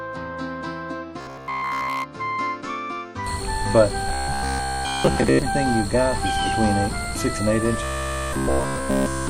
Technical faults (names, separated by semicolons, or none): robotic sound from repeated short buffers